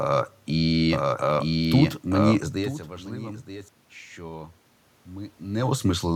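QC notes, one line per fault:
0.93–3.69 s, doubled audio track: a full-band copy of the speech trails the original by about a second at roughly equal loudness, dry with no room colour, starting and stopping abruptly. It is likely a slower second capture path or an edit holding two misaligned copies.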